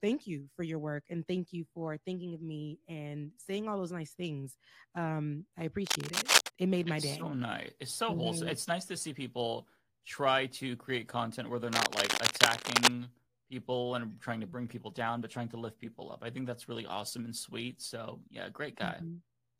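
A worn cable or connector being moved, its contact resistance jumping erratically, is the likely cause of the cable scratch noise from 5.86 to 6.48 s and again from 11.72 to 12.91 s. Dense, ragged scratching bursts sit over the speech, a few dB louder than it.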